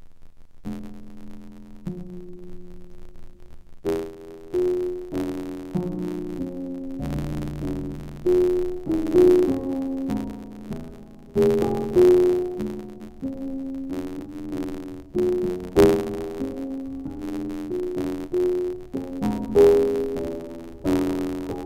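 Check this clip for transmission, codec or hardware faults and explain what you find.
The music carries one fault throughout: interleaved audio read as planar. Each block of about 11.6 ms, which fits a 512-sample block, holds alternating left and right samples, but its first half is read as left and its second half as right. Each half plays stretched across the block, so the sound turns dull and robotic, with a buzz at 86.1 Hz. Unlike a sample-rate mismatch, the tempo holds and there's no clear octave drop.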